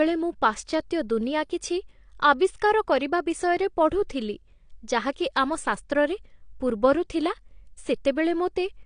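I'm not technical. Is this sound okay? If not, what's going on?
No, the speech sounds dull and watery throughout, likely from AAC compression. Nothing above 9.8 kHz remains, and unlike plain muffling, sustained sounds warble and hiss turns fizzy.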